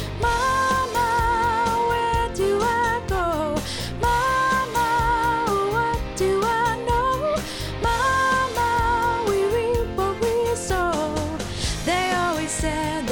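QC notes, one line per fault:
No faults found on this clip; nothing to log.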